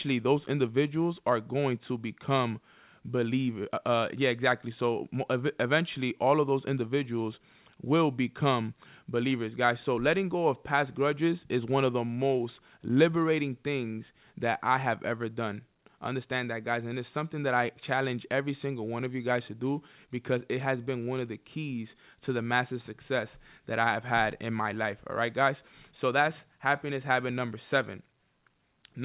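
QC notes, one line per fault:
No faults found; the speech comes through a narrowband call path with nothing above 4 kHz.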